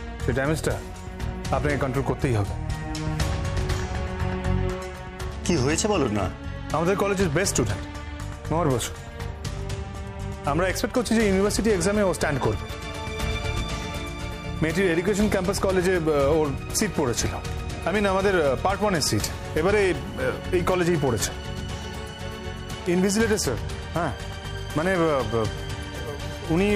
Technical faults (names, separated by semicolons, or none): bit error spike